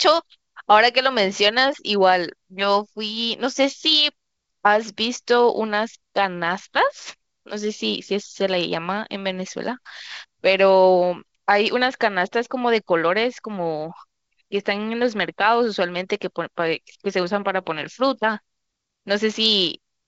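No technical faults detected.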